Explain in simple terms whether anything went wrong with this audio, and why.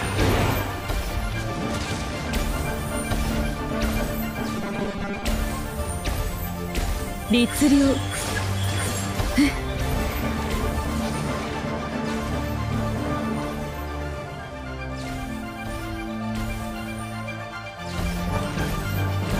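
From 4.57 to 5.23 s the sound turns into a rigid, metallic buzz at 200 Hz. This is robotic sound from repeated short buffers. The likely cause is new audio arriving too slowly, so playback kept repeating a tiny 5 ms slice and about half the real sound was skipped. A plain dropout would leave silence, and a stutter repeats longer, recognisable pieces. Here the tight repeats fuse into a steady mechanical pitch instead.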